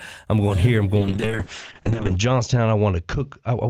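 Right after "I'm going here I'm" at 0.99 s, a call bitrate drop hits. The sound goes coarse and muffled, top end clipped near 8 kHz, which fits roughly 7 kbps.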